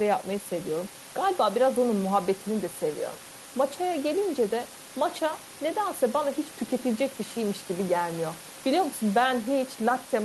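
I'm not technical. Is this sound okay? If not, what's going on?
Yes, this recording is okay; nothing is wrong.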